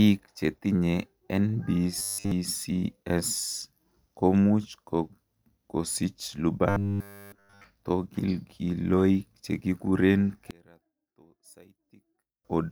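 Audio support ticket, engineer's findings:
Robotic sound from repeated short buffers, 1.99–2.32 s and 6.69–7.64 s, the second ending just before "tokilkiloik chekikuren". Rigid metallic buzz at 100 Hz, consistent with one 10 ms buffer looping. Likely playback buffer underrun. Unlike codec warble, the pitch stays locked and the real audio is skipped.

One channel inverted, 10.51–12.45 s, just after "tokilkiloik chekikuren". Mono sum drops about 29 dB, leaving a faint residue of channel difference. Likely polarity flip in one leg of the stereo path. Unlike a dropout, a faint residue persists rather than silence.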